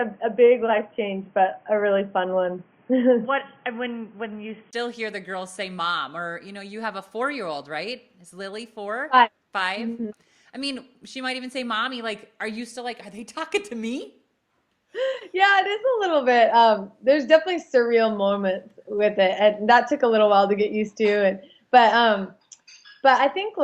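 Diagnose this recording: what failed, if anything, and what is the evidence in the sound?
The first 4.73 s is band-limited, nothing above 3.3 kHz, then a 20 ms gap and full bandwidth: likely an input switched to a poorer device at the driver level.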